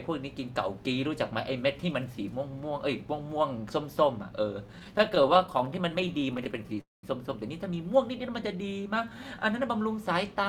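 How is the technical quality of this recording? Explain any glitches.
The recording has three network-related glitches, all from late-arriving audio.

From 4.67 to 6.79 s there are repeated stalls (stutter). The jitter buffer kept running dry. The receiver bridged over thirty brief gaps, each under 20 ms, by continuing the last sound. About 344 ms was added. Nothing is lost, but the speech drags and judders.

From 6.81 to 7.05 s a call audio freeze occurs. The sound stops for about 225 ms. It starts as a short fading buzz and then goes silent for about 170 ms. Packets were likely held up in transit. Speech then resumes where it stopped.

From 8.20 to 9.40 s there is a jitter buffer slow-down. The receiver repeated single pitch periods to rebuild its reserve. Playback runs at about 90% speed and adds 127 ms. The pitch stays the same, but sounds are drawn out.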